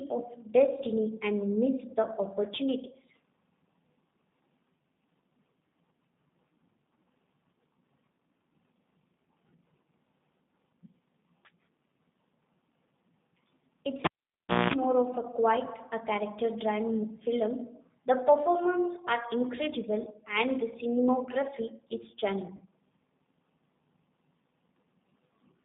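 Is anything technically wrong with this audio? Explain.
Yes. Throughout, the G.729 codec's 8 kbit/s pulse-coded rebuild confines speech to roughly 150 Hz to 3.7 kHz, leaving it band-limited, rough and slightly synthetic.

At 22.57 to 22.61 s, just after "and the cinematography is", VoIP packet loss concealed by the speech codec fills a 30 ms gap, which fits a single lost packet. The decoder extends its last pitch and filter, giving a brief, fading smear.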